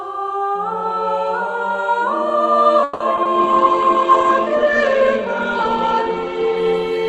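At 2.83 s the sound stretches into a fading buzz for about 170 ms, to 3.02 s, then picks up exactly where it left off with nothing skipped. That is a call audio freeze, likely from packets held up in transit until the jitter buffer ran dry, so the receiver extended the last sound.

Right after, two brief smears land at 3.16 to 3.19 s and 3.23 to 3.27 s. These are short concealed packet loss: about 20 ms of audio never arrived in time each time, and the receiver patched the holes by continuing the preceding sound before blending back in.

From 3.40 s to the end the audio turns rough, watery and duller. This is a call bitrate drop, with the Opus encoder pushed from 48 kbps down to 9 kbps and held at the lowest rate for about 2.7 s. At the low rate the encoder also narrows the bandwidth from 12 kHz to 8 kHz, removing the top end.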